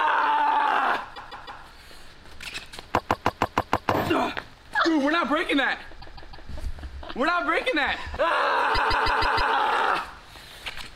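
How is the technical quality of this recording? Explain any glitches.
The recording has audible repeated frames at four points: 1.14–1.61 s, 2.97–3.91 s, 6.00–6.47 s and 8.74–9.52 s. Each time, a block of about 157 ms, which fits a run of six compressed frames, is played again, three, six, three and five extra times respectively. The sound stutters in a loop. Those repeats stretch the audio by 0.47, 0.94, 0.47 and 0.78 s.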